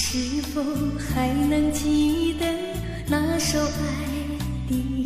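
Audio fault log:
No audible faults found anywhere in the clip.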